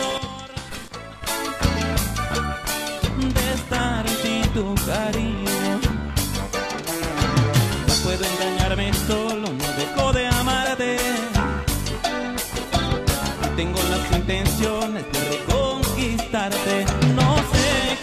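Damaged data in the compressed stream appears at 7.01 s as a single brief blip lasting about 10 ms. At that point the encoded bytes reaching the decoder were wrong, whether lost, zeroed or overwritten, so the frame there could not be read correctly. The decoder misread or dropped that frame and then had to find the next valid frame header to regain sync. The result is a short, sharp disturbance in the sound.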